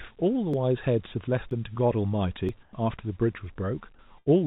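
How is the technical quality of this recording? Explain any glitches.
The speech has three kinds of glitch, heard over telephone-band audio with nothing above 4 kHz, which fits a G.711 A-law call path.

Audio missing between chunks: brief skips at 0.54, 1.51, 2.49 and 3.47 s, almost exactly a second apart. Each loses a sliver of roughly 20 ms and butts the two sides together. The likely cause is a processor that drops audio while switching one-second chunks. The strict regularity and the absence of any fill separate these skips from network loss.

Comfort noise in place of the background: from 2.63 to 2.73 s, about 100 ms of the background, which sits about 30 dB below the loudest speech, turns into smooth, featureless hiss at the same level. The likely cause is a sender that pauses transmission and a receiver that substitutes synthetic noise. Because the level is unchanged, this sounds like a change of texture rather than a dropout.

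Burst of packet loss: between 4.19 and 4.28 s, about 80 ms of audio never arrives. The receiver stretches the last sound for about 74 ms, fading it as a held buzz or hiss, and then resumes further on. That concealed tail distinguishes it from the clean chunk skips.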